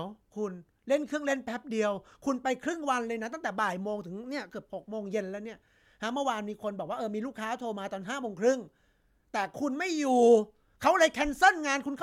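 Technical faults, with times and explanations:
Nothing to flag here: no technical faults turn up anywhere in the speech recording.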